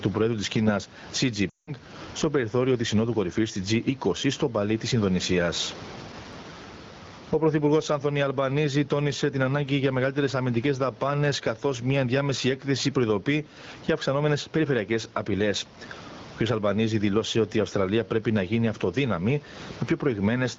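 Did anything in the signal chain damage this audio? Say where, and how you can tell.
Yes. The first problem is gain pumping at the capture and call-processing stage, and it runs through the whole clip. The room noise sits about 32 dB under the speech. The gain swings by roughly 15 dB. The level is clamped hard, so loud and soft syllables come out much the same. The likely cause is input gain set far too high, with a fast limiter pulling it back on every loud sound.

The second problem is lost AMR speech frames, which points to the network or radio link. From 1.49 to 1.73 s the speech smears, thins and drops toward silence. It then recovers weakly just before "στο περιθώριο τη". The gap is about 180 ms, which fits roughly nine consecutive 20 ms frames failing their checks. The AMR-WB decoder filled the gap by repeating the last good pitch and spectral envelope at falling gain. In wideband that fade is quick. 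The surrounding HD Voice speech is clear, consistent with 12.65 kbit/s.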